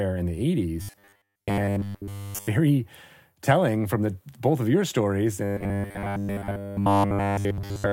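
A speech clip with robotic sound from repeated short buffers at 0.82–2.48 s and from 5.44 s, after "both of your stories", to the end. Each becomes a rigid 100 Hz buzz, likely from a 10 ms stretch looped while new audio is missing.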